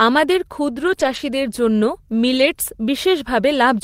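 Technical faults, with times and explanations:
0.83–0.93 s, 0.99–1.17 s and 2.37–2.51 s: lost packet rebuilt from error correction. The sound turns briefly rough and grainy, with added noise but no gap. Each lost stretch was replaced by a low-bitrate backup copy carried inside the next packet, which the decoder played instead.
0.95–0.99 s and 2.53–2.57 s: short concealed packet loss. A quick smear or wobble is heard, sitting just beside the rebuilt passages. About 20 ms of audio arrived too late, so the receiver extended the preceding sound to cover it, then blended back into the real signal.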